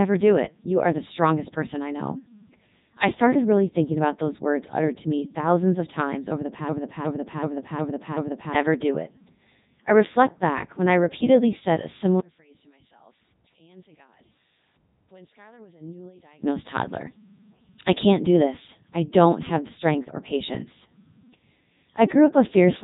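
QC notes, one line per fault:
Throughout, Codec 2 vocoder: the speech comes out robotic and buzzy, with heavy damage across the whole clip and nothing above 3.8 kHz. The decoder never rebuilds the original waveform. It resynthesises each stretch from sine waves driven by a transmitted pitch, a voicing decision, an energy level and a coarse spectral envelope. The tonal, mechanical texture is what that parametric model sounds like, and the degree of coarseness fits the codec's top 3.2 kbit/s mode.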